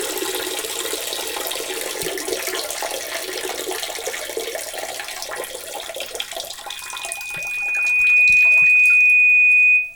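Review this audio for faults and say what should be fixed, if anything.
A loudspeaker feedback squeal runs from 6.67 s to 9.95 s. The microphone picks up its own loudspeaker, and the loop gain at 2.5 kHz exceeds one, so that tone builds over roughly a second and a half to about 15 dB above the sound. A spectrogram shows a bright horizontal line at 2.5 kHz, and the waveform envelope swells steadily. Prevent it by lowering loudspeaker gain, moving the microphone away from the loudspeaker, or notching 2.5 kHz.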